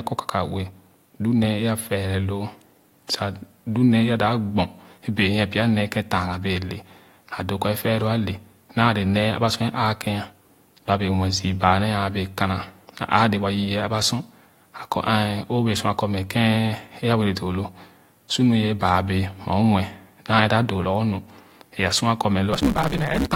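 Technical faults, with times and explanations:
22.52–23.35 s: block size mismatch (truncated). The speech suddenly hurries at 1.6 times its normal speed, and a buzz at 138 Hz, the block rate, sits over it while the timbre stays the same. One stage writes longer blocks than the next reads, and the tail of each block is thrown away. Every cut skips a piece of audio and leaves a seam, and that seam repeats as the buzz. The ratio fits 512-sample blocks being read as about 320.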